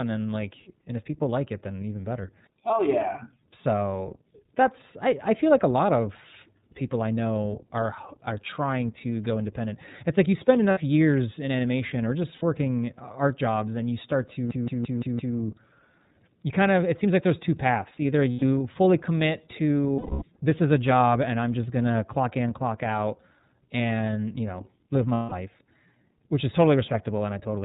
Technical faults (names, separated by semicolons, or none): iLBC codec; lost iLBC frames